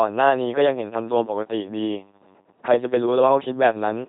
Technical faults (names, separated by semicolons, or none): LPC-10 vocoder